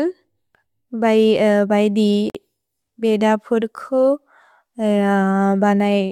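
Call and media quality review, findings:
Gap at a join of encoded pieces, 2.30 to 2.35 s in the speech: 48 ms gap, edges smeared by the codec. Separately encoded segments joined untrimmed, encoder start delay and last-frame padding retained. Speech resumes where it stopped, nothing lost, unlike packet loss.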